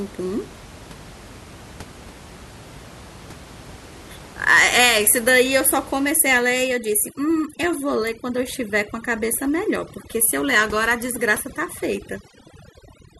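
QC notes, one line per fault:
6.10 to 13.20 s, overdone noise removal: from 6.10 s the steady room noise, sitting about 20 dB under the speech, collapses to near silence flecked with twinkling specks, as an over-aggressive noise reducer drops each frequency band near its noise estimate, stripping quiet speech detail.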